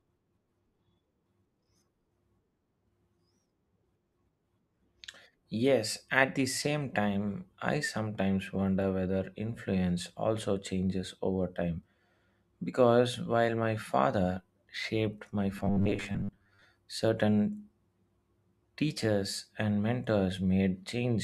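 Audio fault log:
15.57–16.66 s: robotic sound from repeated short buffers. For just over a second the speech turns into a rigid, metallic buzz pitched at 100 Hz that still follows the phrasing roughly. The likely cause is audio arriving too slowly, so playback keeps looping the most recent fragment of sound to fill the gaps. The 100 Hz buzz points to a loop about 10 ms long, and roughly half of the audio in this stretch is repeated rather than new.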